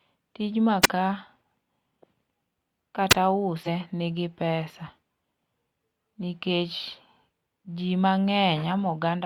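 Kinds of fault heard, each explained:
Wireless microphone squelch dropout: The radio link from an analogue FM microphone weakens until the receiver's squelch gate closes and mutes its output. The speech here gives way to a quick swell of hiss, then a brief hole of near silence, before the voice returns. This happens twice: from 0.82 to 0.89 s, with the mute lasting about 34 ms, and from 3.09 to 3.15 s, where the silent gap is shorter, about 21 ms.
Damaged data in a compressed stream: Some bytes of the encoded stream are corrupted, so the decoder misreads the affected frames, loses its place and hunts for the next valid frame header. Instead of clean speech, a short chirp, squawk, click or hole cuts through at those points. It occurs twice, from 3.63 to 3.68 s and again from 7.62 to 7.66 s, the disturbances lasting about 53 ms and 44 ms.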